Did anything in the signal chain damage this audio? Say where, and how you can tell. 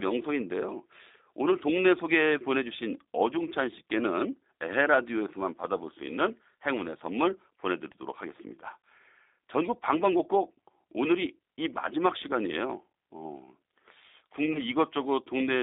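Yes. At the codec stage, the whole clip went through G.729 compression. The speech is confined to roughly 250 Hz to 3.7 kHz and has a plainly rough, synthetic texture, which fits an 8 kbit/s coder that rebuilds each frame from a vocal tract filter and a few pulses.

On the network side, there is VoIP packet loss concealed by the speech codec from 14.52 to 14.60 s. About 20 ms of audio went missing, consistent with a single dropped packet. The decoder filled the gap by extending its last pitch and filter into a fading buzzy tone or coloured noise, and the sound stays weak until about 14.6 s.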